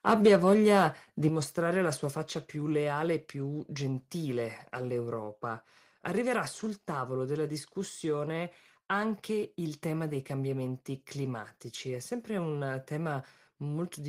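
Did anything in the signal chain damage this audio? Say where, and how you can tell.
Yes. The opening stretch, from 0.07 to 0.85 s, ends just before "di mostrare la sua" and shows microphone overload at the converter input. The loudest peaks drive about 3 dB past full scale, and a small share of samples, roughly one or two percent, get flattened. The likely cause is input gain set too high ahead of the ADC. Unlike codec distortion, the damage is a hard, crackly edge confined to the peaks, not a smeared or watery texture spread over the sound.

The input volume also steps down twice, which points to call processing lowering the device's input gain. At 0.28 s the level drops by about 2 dB, and at 1.29 s, just before "mostrare la sua", by about 6 dB. The likely trigger is the clipping that precedes both drops. The sound and the background fall together in one instant step. An automatic gain control or compressor would ride the level gradually and recover, but here the level just drops and stays lower.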